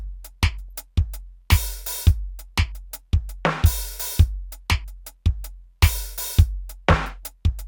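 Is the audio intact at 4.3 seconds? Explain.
Yes, the music plays through 4.3 seconds without any audible fault at that moment.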